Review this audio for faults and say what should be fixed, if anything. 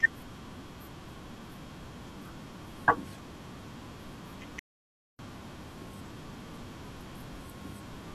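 An audio dropout to silence runs from 4.59 to 5.19 s, and about 0.6 s of the speech is lost. The input was likely cut by a failed connection or stray mute while recording continued, writing silence. The waveform shows a dead-flat line and the spectrogram a completely black gap, with no room tone. Securing cables and monitoring the input live during capture would prevent it.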